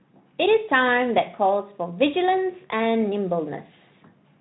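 No technical faults can be heard in this speech.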